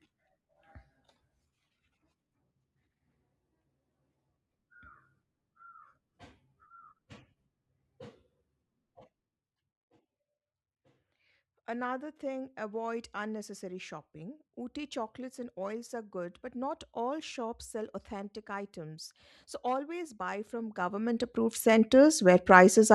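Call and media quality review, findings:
Zipper noise, 20.48 to 21.93 s: fine ticking/zipping riding on the speech while the level changes by about 20 dB. Steps arrive at roughly 200 per second, so gain is being applied in unsmoothed increments, likely once per buffer, each jump leaving a small click. Probable component: gain/volume stage lacking per-sample ramping.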